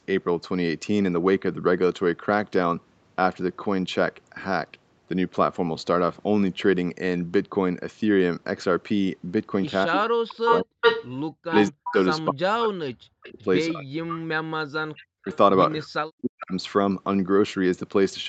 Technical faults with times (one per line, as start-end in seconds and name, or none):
9.86-10.85 speech suppressed in double talk
10.45-11.94 echo leak
11.45-15.29 speech suppressed in double talk
13.25-13.41 echo leak
15.32-15.36 echo leak
15.83-16.53 speech suppressed in double talk
16.39-16.45 echo leak